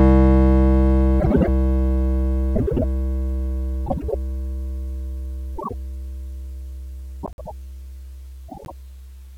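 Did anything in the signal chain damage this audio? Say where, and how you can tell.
Yes. The music shows frames out of order, a network or storage-stage fault where two adjacent runs of coded frames were swapped before decoding. It is heard at 1.20–1.48 s, 2.55–2.84 s, 3.86–4.15 s, 5.56–5.74 s, 7.23–7.52 s and 8.48–8.72 s. Each stretch plays with its halves exchanged, a garbled flutter. The swapped blocks run 104.5 ms, once 52.2 ms and once 78.4 ms, which fits runs of four, two and three frames. No time is lost.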